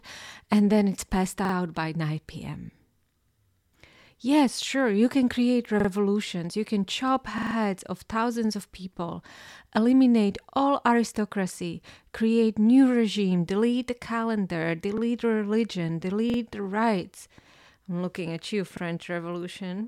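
Short stutters, each a roughly 43 ms chunk of speech replayed with a hard join, occur at 1.45–1.54 s, 5.80–5.89 s, 7.38–7.55 s (longest, four repeats), 10.50–10.54 s, 14.98–15.02 s, 16.30–16.38 s and 18.77–18.82 s. This is a repeated buffer: new audio arrived late, so the device replayed its last buffer, which fits a 2048-sample size, rather than dropping any sound.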